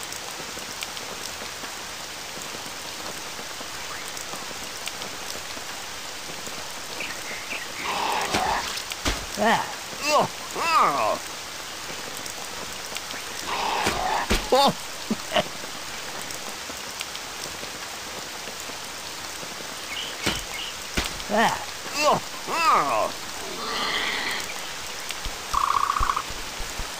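Dropped buffers (overrun) at 6.57 s and 13.56 s: each is a jump where the sound skips ahead by a few milliseconds with no gap, likely because the program failed to collect a buffer before the hardware overwrote it, splicing the two sides together.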